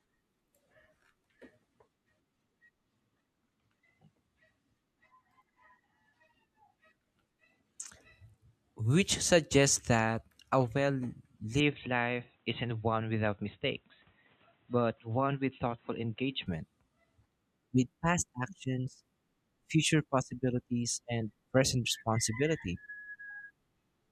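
Input switched to a poorer device, from 11.60 to 16.46 s: the speech suddenly turns dull and boxy, with nothing above 4 kHz and a faint new noise floor, at an unchanged level and with no gap. This likely comes from recording switching to a narrower-band microphone.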